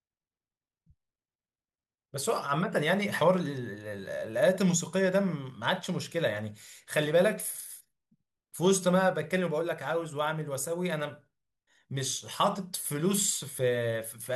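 Nothing in this speech recording stands out as a technical fault, so there's no problem to point to anywhere along the way.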